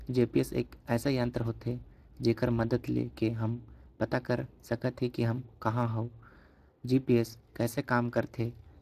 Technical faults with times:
0.00-8.81 Speex codec

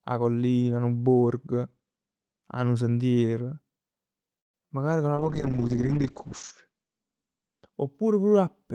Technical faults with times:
4.39-4.67 call audio freeze
4.59-4.70 short concealed packet loss
5.16-7.79 call bitrate drop

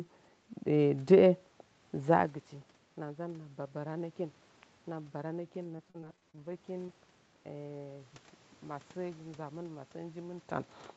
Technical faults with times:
5.63-6.90 repeated packet loss (robotic sound)

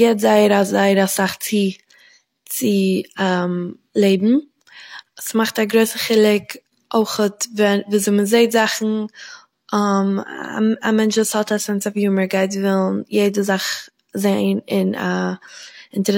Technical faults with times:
none

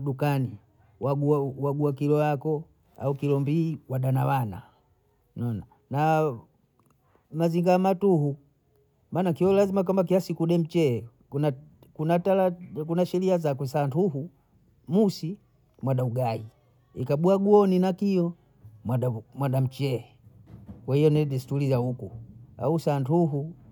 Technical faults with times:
none

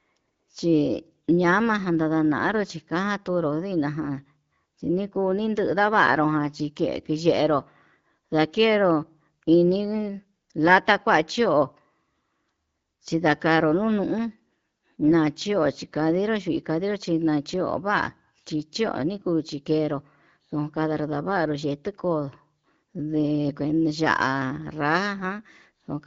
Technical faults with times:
none

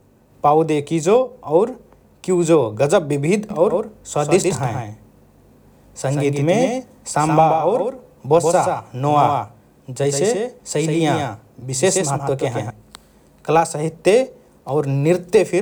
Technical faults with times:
3.50-12.70 doubled audio track

